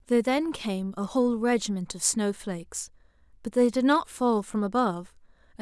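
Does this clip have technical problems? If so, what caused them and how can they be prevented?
No, there's nothing technically wrong to hear in this bit of speech, so there's nothing to fix or guard against here.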